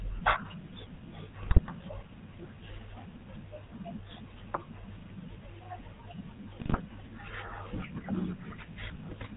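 Throughout, the speech carries the buzzy, gravelly roughness of the GSM full-rate codec. The pulse-driven model keeps nothing above 4 kHz, which fits a 13 kbps stream. From 1.40 to 1.71 s and again from 6.60 to 6.80 s, GSM bit errors corrupt the decoder's values, producing squawks, pops and gargling.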